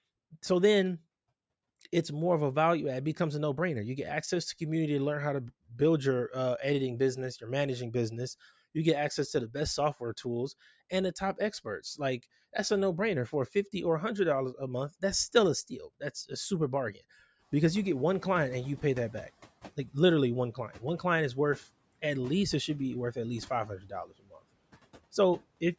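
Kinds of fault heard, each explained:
Speech cut by the noise suppressor: between 23.66 and 24.37 s the suppressor treated parts of the speech as background and pulled them down by up to about 17 dB for roughly 400 ms, so they sound swallowed. The waveform envelope dips sharply, and the spectrogram thins toward the noise floor.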